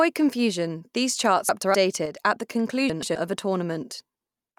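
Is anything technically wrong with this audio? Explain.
Yes. Frames out of order occur at 1.49–1.75 s (after "confusion these", before "at the"), 2.90–3.16 s (after "at the", before "of a") and 4.14–4.27 s. Adjacent blocks of audio, about 128 ms each in the first two cases and 64 ms in the last, were decoded in swapped order. Each stretch plays with its halves exchanged, so it sounds like a garbled flutter, and no time is lost.

A sudden gain jump occurs from 2.06 to 2.16 s, just before "at the". The level changes abruptly, likely from a gain setting applied without a ramp, so the sound and background noise drop together by about 6 dB for roughly a tenth of a second.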